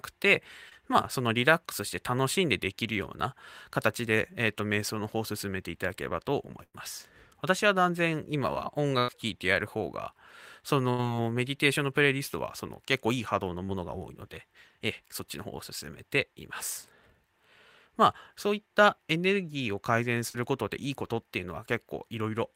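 At 0.69 s a short concealed packet loss fills about 20 ms of missing speech by extending the preceding sound, leaving a brief smear as the decoder blends back into the real signal. The same fault recurs at 13.66 s (20 ms) and 20.30 s (40 ms).

Between these, bursts of packet loss occur at 6.63, 8.99 and 10.90 s, removing about 100, 100 and 80 ms. Each gap is bridged by a held continuation that fades out. Voiced segments become a flat buzz and unvoiced ones a dying hiss, and the audio resumes with that stretch gone.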